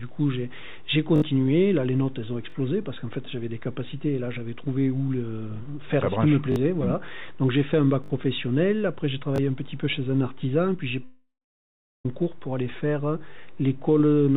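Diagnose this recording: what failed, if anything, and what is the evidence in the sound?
Short stutters at 1.16 s, 2.5 s, 6.52 s, 8.04 s and 9.36 s: a tiny slice of sound repeats with a hard join each time, three extra plays at 1.16 and 8.04 s, two at 2.5 and 6.52 s, one at 9.36 s. This is a repeated buffer at the driver or buffer stage. Playback ran dry and the device replayed its last block, each repeat 20 ms long, which fits a 20 ms buffer. Each stutter costs a few tens of milliseconds of real audio.

From 11.04 s to 12.06 s the sound smears into a fading buzz, drops to silence for about 0.74 s, then resumes at 12.06 s with the intervening audio simply gone, roughly a second of it. This is a long network dropout, likely caused by packets failing to reach the receiver. The concealment stage extended the last received sound, let it decay, then gave up until fresh audio arrived. The narrowband call path, with nothing above 4 kHz, can be heard throughout.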